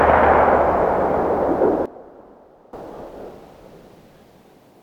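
At 1.86 s the digital gain likely dropped by about 17 dB in a single sample step, with no ramp, producing a sudden gain jump. Sound and background noise fall together abruptly, stay quieter until 2.73 s, then snap back up to their former level.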